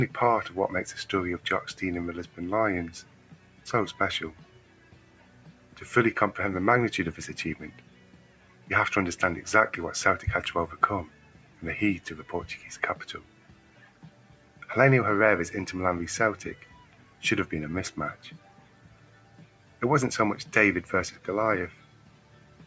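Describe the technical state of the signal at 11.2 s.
At 11.2 s the signal is inside a span, from 11.07 to 11.63 s, where sound is cut by the noise suppressor. The suppressor classes the sustained material as noise and pulls it down, reaching about 8 dB of attenuation, so the held portion sinks and its decay is cut short.

That dip sits on a broader fault across the whole clip: a noise suppressor applied to music or sounds. Its gain control keeps misreading steady tones and tails as noise, so level swings by around 10 dB, giving audible pumping and a thinned texture.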